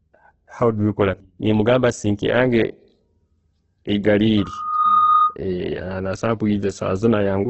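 Loudspeaker feedback squeal runs from 4.37 to 5.37 s in this speech recording: a steady tone at 1.2 kHz swells over roughly half a second until it sits about 5 dB above the speech, then stops. A microphone was picking up the loudspeaker it fed, and at that one frequency the loop gain passed unity, so the tone kept reinforcing itself. Opus compression damage is present from start to finish. The audio is heavily grainy and rough, with nothing above 8.1 kHz, which fits the music-oriented CELT mode at a starved rate near 12 kbps. That mode keeps each band's energy but, lacking bits, fills bands by folding lower ones or with noise. The texture turns coarse and noisy instead of swirly. A heavily squeezed Opus encode is the likely cause, and the 8.1 kHz ceiling reflects the narrowed bandwidth.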